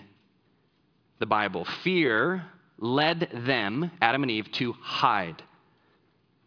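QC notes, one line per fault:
No faults heard in this speech recording.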